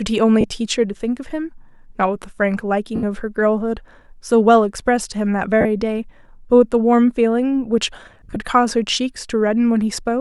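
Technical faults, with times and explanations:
0.41 s, 2.96 s, 5.61 s and 8.06–8.36 s, lost LE Audio frames: 30, 70 and 40 ms gaps, then brief dropouts scattered over 300 ms, are filled by repeating the last spectrum with random signs. The speech smears into noise, and the spectrogram shows harmonics replaced by blurred, structureless patches.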